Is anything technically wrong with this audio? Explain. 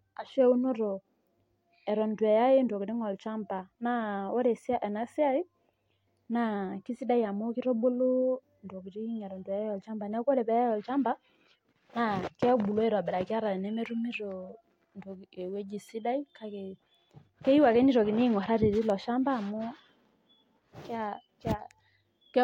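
No, nothing technically wrong can be heard here.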